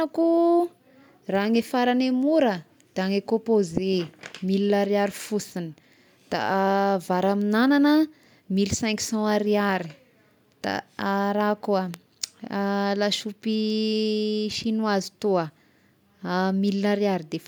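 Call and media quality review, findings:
Loud pop at 11.94 s: single sharp pop well above the speech level, speech continuing underneath. Likely a voltage transient from a connector, switch or static discharge.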